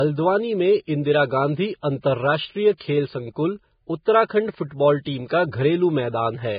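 Throughout the speech, the sound is dull and boxy, with nothing above 4.9 kHz and the smeared artefacts of a heavy encode. The likely cause is low-bitrate audio saved at a high bitrate. A very low-rate first encode was re-saved as high-rate MP3, which cannot restore what was stripped away.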